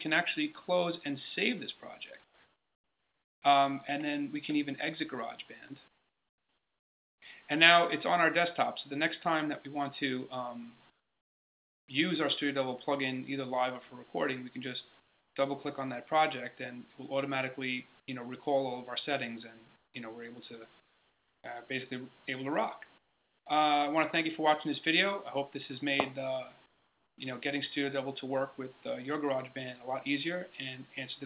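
Eight pauses have their background swapped for steady, featureless noise, about 10 to 21 dB quieter: 2.24–3.42, 5.88–7.22, 10.9–11.88, 15.0–15.36, 19.76–19.94, 20.8–21.44, 22.98–23.46 and 26.66–27.18 s. This is likely comfort noise in place of the background, filling silences under discontinuous transmission, over a call codec band-limited to 4 kHz.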